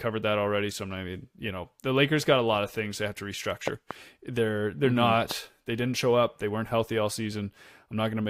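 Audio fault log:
3.68–3.93 s, loud pop: two sharp pops in quick succession, peaking at about 15 dB above the speech, which continues underneath. The pair of transients is likely a brief voltage step from a switch, connector or static discharge, shaped and rung by the following circuitry.
5.31–5.33 s, loud pop: a single shorter pop at about 10 dB above the speech, again sitting on top of the signal, likely from a similar electrical transient.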